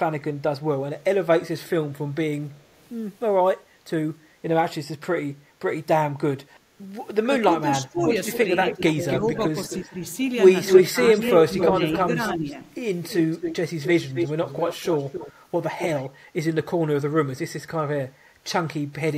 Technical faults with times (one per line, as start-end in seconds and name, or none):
2.51-2.89 echo leak
7.24-9.99 speech suppressed in double talk
7.96-9.89 echo leak
10.65-12.55 echo leak
10.90-12.59 speech suppressed in double talk
13.02-15.33 echo leak
15.78-16.09 echo leak